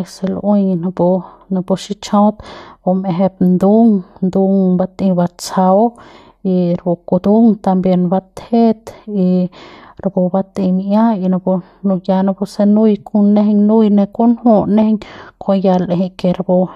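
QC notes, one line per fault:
No faults detected on the speech track; nothing to log.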